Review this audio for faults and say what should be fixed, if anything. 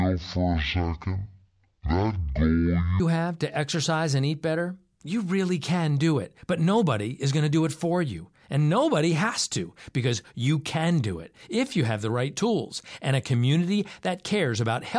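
From 0.0 to 3.0 s the speech plays at half speed and drops a full octave, the sign of a wrong sample rate: audio recorded at 44.1 kHz is being clocked out near 22 kHz with no conversion. Unlike a pitch-shift effect, timing and pitch move together by the same ratio. Fix it by resampling or matching the playback rate to the file's stated rate.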